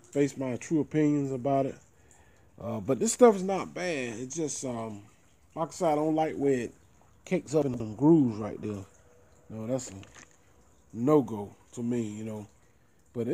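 From 7.62 to 7.80 s the sound briefly jumbles. These chunks are out of order: one 60 ms chunk arrived two chunks late and plays after the two that should follow it, so nothing is lost but the sequence scrambles.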